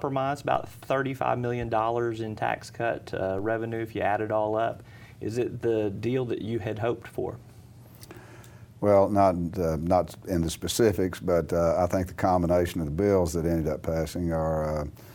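A DC step occurs at 0.55 s and again at 3.39 s: the waveform's zero line abruptly shifts by about -34 dBFS, producing a low thump each time, then drifts back slowly as a 2 Hz high-pass drains the offset, while the sound continues unchanged.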